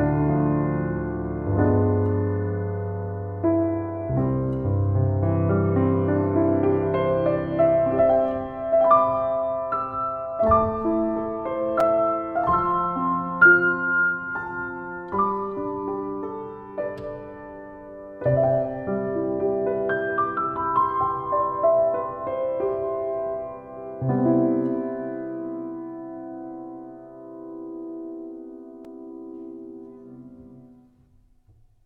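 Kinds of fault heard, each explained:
Block of digital silence: the sound drops abruptly to silence and returns without a fade, at 11.80 s for 5 ms and at 28.85 s for 2.6 ms, each heard as a tick. Waveforms show a flat gap, spectrograms a thin broadband stripe.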